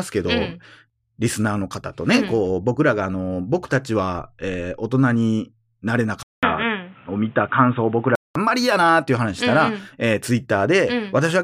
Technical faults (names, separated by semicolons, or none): input switched to a poorer device